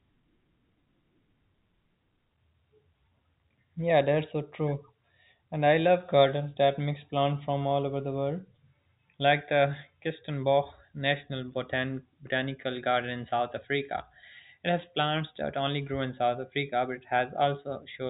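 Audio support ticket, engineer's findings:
Nothing to flag on this one, just ordinary G.711 telephone coding on the speech, with the band topping out around 3.8 kHz as you'd expect from a phone line.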